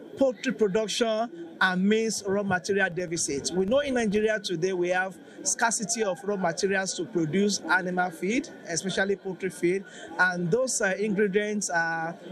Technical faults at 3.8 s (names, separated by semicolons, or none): filter restarted on every block